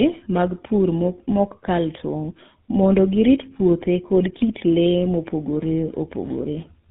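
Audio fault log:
Throughout, tandem speech coding: the speech passed through GSM full rate coding twice, carried as G.711 mu-law in between, so the second GSM coder re-encoded already degraded output. Errors compound, leaving the speech rough, muffled and warbly, with nothing above 3.8 kHz.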